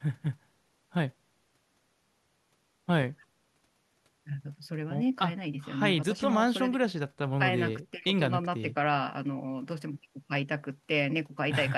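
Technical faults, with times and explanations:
No technical faults detected.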